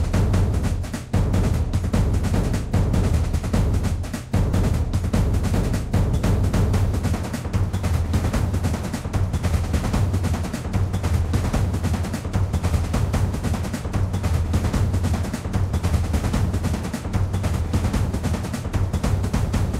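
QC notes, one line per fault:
4.51–4.53 s: lost LE Audio frames. About 20 ms of sound dropped. The decoder repeated the last spectrum with scrambled signs, giving a brief noisy smear. On a spectrogram it shows as a short, blurred vertical band.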